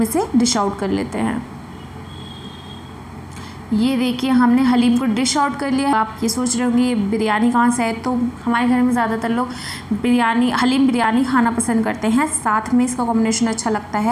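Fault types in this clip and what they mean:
Damaged data in a compressed stream: corrupted bytes make the decoder misread frames and hunt for the next valid header, producing short chirps or blips at 1.46 to 1.49 s, 5.93 s and 11.03 s.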